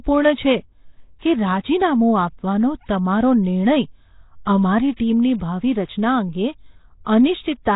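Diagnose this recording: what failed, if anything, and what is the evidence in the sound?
Codec stage: throughout, speech sounds rough, hissy and smeared with nothing above 3.8 kHz, likely Nellymoser compression at about 16 kbps. The noise-filled bands set it apart from a plain low-pass filter.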